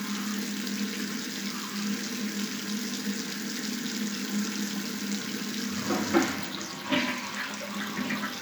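No technical faults are audible anywhere in the sound.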